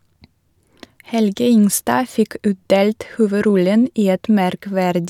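No technical faults can be heard anywhere in the recording, and the signal stays steady and intact for its whole duration.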